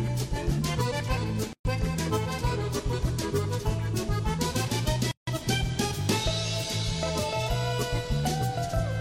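At 1.53 s the sound drops into a 120 ms silence, resuming at 1.65 s, and at 5.11 s a second silence of 160 ms runs to 5.27 s. Both are gaps at a join of encoded pieces. Separately encoded segments were butted together with their encoder start delay and final-frame padding left in place. Each gap has smeared edges, and the sound picks up exactly where it broke off.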